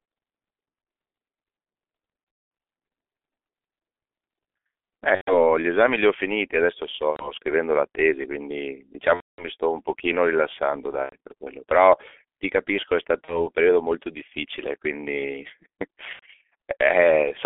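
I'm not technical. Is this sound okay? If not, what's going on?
No. The speech sounds muffled, hoarse and thin throughout, with blurry consonants, like an old phone line. That comes from the G.723.1 codec, an early internet-calling format that squeezes the voice hard and throws away the upper, crisper part of the sound.

There are also seven brief moments where the voice turns into a fading buzz or smeared hiss: 2.3–2.6 s, 5.15–5.34 s, 7.11–7.32 s, 9.14–9.48 s, 11.03–11.16 s, 13.25–13.47 s and 16.13–16.26 s. This is VoIP packet loss concealed by the speech codec. Pieces of the call went missing, and the receiver guessed at them by stretching out the last sound it had.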